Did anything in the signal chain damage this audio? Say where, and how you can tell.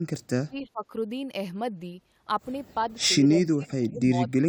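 Yes, in call processing. The speech dips sharply from 0.33 to 0.85 s, roughly 30 dB down, and again from 3.28 s to the end, by roughly 25 dB. This is likely speech suppressed in double talk. The echo canceller mistook overlapping far-end sound for echo and attenuated this talker too.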